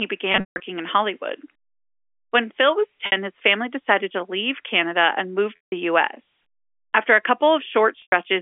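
Speech over a G.711 telephone line has packet loss with pitch repetition at 0.32–0.60 s, 3.06–3.12 s, 5.57–5.72 s and 8.02–8.12 s. The receiver loops the last pitch period to cover each gap. Short gaps sound like a held buzz. The longer runs, up to 160 ms, fade toward silence before speech resumes.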